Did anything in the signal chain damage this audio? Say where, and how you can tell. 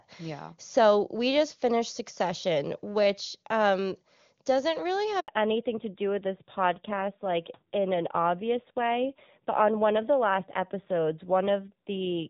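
Yes. The handover gap comes at 5.20 to 5.28 s, right after "which um doesn't really". This is a network-stage fault. The voice dies away within a few tens of milliseconds and leaves about 80 ms of silence, because no speech frames arrived while the call switched links. Whatever was said in that span is gone.

The fallback to narrowband starts at 5.28 s and runs to the end. This is a codec-stage fault. Before it, the clear HD Voice band extends up toward 7 kHz. After it, nothing sounds above 4 kHz, and the speech turns dull and rough, which fits a low-rate narrowband AMR mode of about 7.4 kbit/s.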